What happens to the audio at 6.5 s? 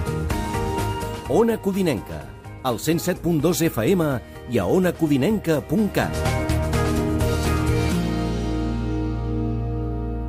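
Nothing goes wrong at 6.5 s; the audio runs on intact through that moment with no dropout, click or other audible fault.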